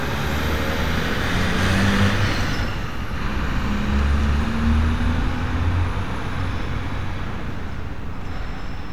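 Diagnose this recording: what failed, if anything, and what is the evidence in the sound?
Nothing failed here that I can pick out; the sounds come through at every stage without anything in them pointing to a problem.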